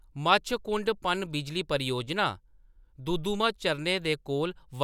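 No audible technical faults.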